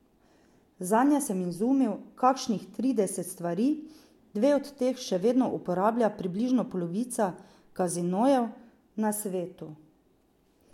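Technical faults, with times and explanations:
No technical faults can be heard in this speech recording.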